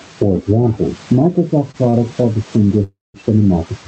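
A speech recording heard through an Opus call path, likely with input gain set far too high and a fast limiter clamping each loud syllable. The result is gain pumping: the gain swings by about 15 dB, leaving the sound squashed. Packets arriving late emptied the jitter buffer three times, causing short stalls from a late packet at 1.71–1.77 s, 1.90–1.96 s and 2.21–2.33 s, where the receiver stretched the last sound by 23, 34 and 16 ms, holding it slightly too long. A longer hold-up, probably in transit, caused a call audio freeze from 2.84 to 3.17 s. The last sound is drawn out as a fading buzz or hiss, then about 180 ms of silence, before speech resumes where it stopped, about 0.3 s late. The quiet room noise sits well below the speech, and the call codec's high end stops around 8 kHz, which fits a mid-rate setting near 40 kbps.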